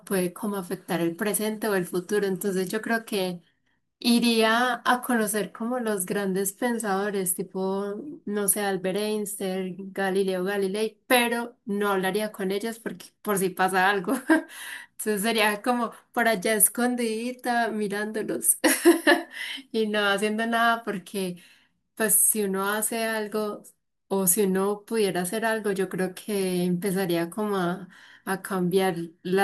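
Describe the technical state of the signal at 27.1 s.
At 27.1 s the speech signal is intact, with no audible dropout, clipping, distortion or other technical fault.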